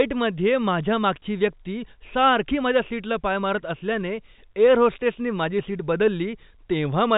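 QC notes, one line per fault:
No faults found; the speech carries G.711 telephone coding, with nothing above 3.8 kHz, as that format gives.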